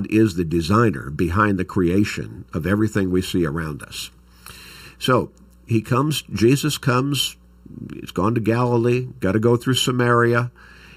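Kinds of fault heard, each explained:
Channel delay (comb filtering): Throughout this speech, one channel arrives late by roughly 0.7 ms, and when the two are summed to mono, content common to both cancels at regularly spaced frequencies, the first near 700 Hz and then at odd multiples above it. The result sounds hollow and phasey rather than full. On a spectrogram this shows as fixed horizontal dark bands evenly spaced up the spectrum, unchanged for the whole clip, while the waveform itself looks ordinary.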